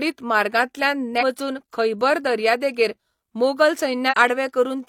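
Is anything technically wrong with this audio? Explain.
Yes, there's damaged data in the compressed stream, twice in this speech, at 1.17–1.23 s and 4.08–4.15 s. Corrupted frames throw the decoder off sync, so you get brief glitches.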